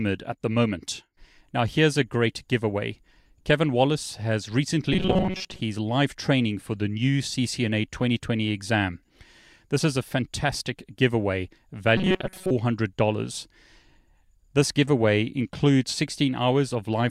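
From 4.93 to 5.61 s, just before "live training for the", the speech turns into a rigid, metallic buzz near 188 Hz. It happens again from 11.97 to 12.51 s, after "is a fantastic giveaway". This is robotic sound, likely from repeated short buffers of about 5 ms, with most of the real audio skipped.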